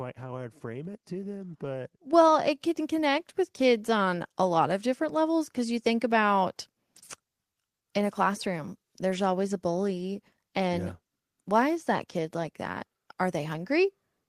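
Microphone volume stepped up at 2.13 s: right after "it to them but" and before "it can", the whole signal jumps in level by about 7 dB in a single step. The call software judged the microphone input too quiet and raised the device's input volume at once rather than gradually, so the talker and the room noise behind them get louder together, mid-phrase, with no fade to soften the change.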